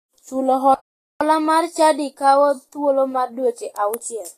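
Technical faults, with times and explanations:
throughout, Vorbis compression: The speech sounds hissy and grainy, with roughened tones and smeared consonant attacks, and nothing is left above 14.2 kHz. This is likely lossy Vorbis coding at a low bitrate, near 27 kbps, where treble detail is quantised into noise.
0.74 to 1.21 s, playback stall: The speech stops dead mid-flow and the output stays silent for about 0.46 s before resuming. The likely cause is that the player ran short of data or its playback thread was blocked until it recovered.
1.21 to 4.21 s, catch-up at higher speed: Right after the gap, the speech runs 1.1 times faster and sits roughly a semitone and a half higher, then settles back. The player is resampling its backlog to win back the time lost in the stall.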